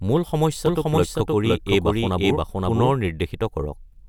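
From about 0.66 s to 2.92 s you get a doubled audio track: the speech is layered over itself, with a second full-band copy trailing roughly half a second behind at about the same loudness. It has no decay or room colour, so it's a plain repeat, and it cuts in and out abruptly at both ends. Most likely the same signal got picked up a second time through a slower path, or an edit left two copies out of step.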